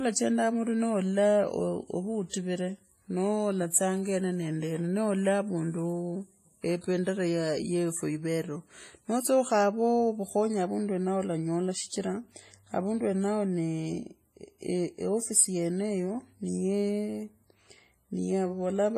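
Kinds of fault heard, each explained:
WMA compression: The speech sounds heavily ringing and washy, with a hiss that swells and fades along with it. Nothing is heard above 15.4 kHz. The likely cause is a WMA transform encoder at a low bitrate, around 24 kbps, smearing quantisation noise over long blocks.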